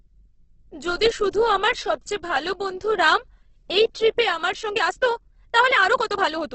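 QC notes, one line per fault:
Throughout: Opus compression, likely from Opus running in its music (CELT) mode at a low rate, consistent with roughly 12 kbps. Short of bits, the encoder fills bands with folded or noise content, so the speech turns grainy and rough, with nothing above about 8 kHz.
4.59–6.55 s: time-stretched section, likely from software squeezing the audio to fit a shorter length by dropping short pieces while holding pitch. Right after "রাম এই ট্রিপে আমার", the pace jumps to 1.52 times faster, sounding rushed at unchanged pitch.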